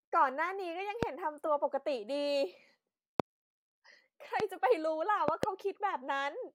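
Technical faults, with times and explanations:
1.03–1.05 s, 3.20–3.22 s, 4.40–4.42 s and 5.28–5.46 s, loud pop: brief pulses about 20 dB above the speech, single pops except a double at 5.28–5.46 s, likely from a voltage spike such as a switch or static discharge. Unlike a dropout click, the speech continues unbroken underneath.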